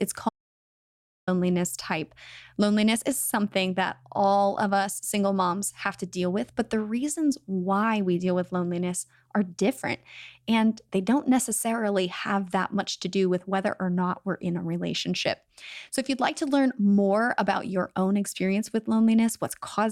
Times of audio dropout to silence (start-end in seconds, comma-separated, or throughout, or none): 0.29-1.27